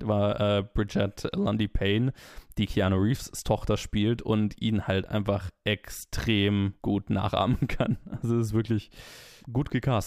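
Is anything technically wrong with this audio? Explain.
Yes. Sample clock jitter runs throughout the speech. The converter's clock wanders by roughly a microsecond, so each sample lands slightly off time, and the error tracks the waveform's slope. This leaves a faint hiss about 45 dB below the signal, rougher on loud, bright sounds and absent in pauses.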